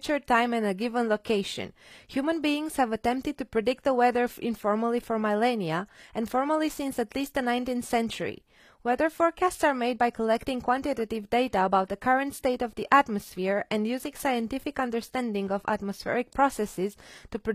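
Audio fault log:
Throughout, HE-AAC compression: the speech has a bright top end that doesn't ring true, and the s sounds come out gritty and lispy, with nothing at all above 14.9 kHz. That's likely spectral band replication at work: the codec keeps only the lower spectrum and patches the treble by copying lower bands upward under a rough envelope, so the upper harmonics don't line up with the real ones. The damage is plainly audible, which fits a low bitrate around 24 kbps.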